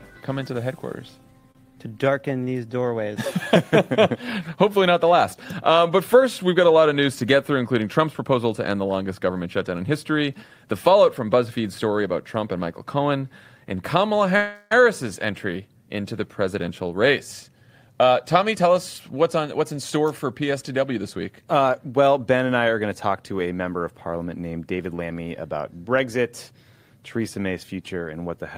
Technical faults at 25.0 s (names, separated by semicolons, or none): jitter buffer speed-up